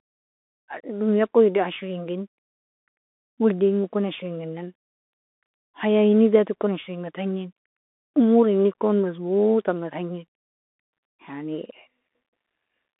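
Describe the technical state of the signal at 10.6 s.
Narrow and muffled at 10.6 s, as throughout, with scratchy s sounds, a granular hiss, and nothing above 3.8 kHz: a Bluetooth CVSD headset codec, whose one-bit up-or-down steps at 64 kbit/s can't keep up with loud high sounds.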